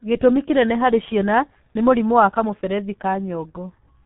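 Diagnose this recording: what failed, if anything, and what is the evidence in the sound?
The failure is at the codec stage: the speech has been through the G.723.1 codec for its whole length. Nothing reaches above 3.8 kHz, so the audio is dull and muffled, and the damage is heavy, with a hoarse, buzzy texture and smeared consonants. The codec models the voice in coarse 30 ms frames and encodes each with very few bits, which fits its 6.3 kbit/s mode. Fast transitions fall between model updates and lose definition.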